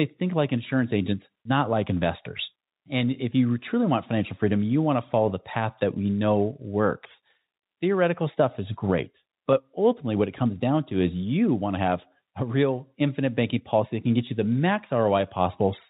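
No technical faults can be heard in this speech clip. It has the band-limited sound of a telephone-style call path, with nothing above 4 kHz, which points to a narrowband codec such as G.711 mu-law at 64 kbps.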